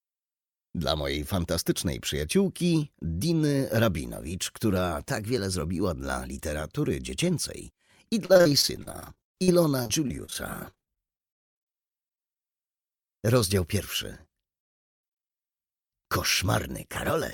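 From 8.25 to 11.61 s, repeated packet loss causes dozens of gaps up to 42 ms, filled by repeats: choppy, robotic, showing copied spectrogram blocks.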